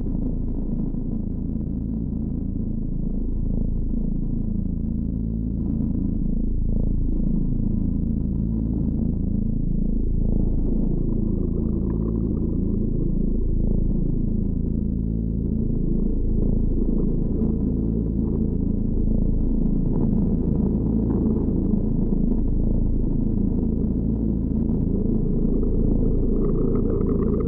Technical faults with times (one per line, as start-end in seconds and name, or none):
2.05 compressed frames skipped
13.89 compressed frames skipped
15.61 compressed frames skipped
17.28 compressed frames skipped
18.93 compressed frames skipped
23.06 compressed frames skipped